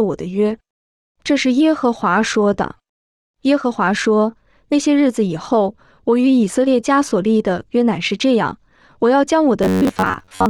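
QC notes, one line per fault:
9.63–10.49 s, robotic sound from repeated short buffers: new audio likely stopped arriving often enough, so playback filled each gap by repeating the last block of about 10.7 ms while the real audio in between was skipped, and most of this span is made of repeats. Looping that short block stamps a fixed buzz at 93.8 Hz onto the speech, turning the final stretch into a rigid, metallic drone that follows the original only roughly.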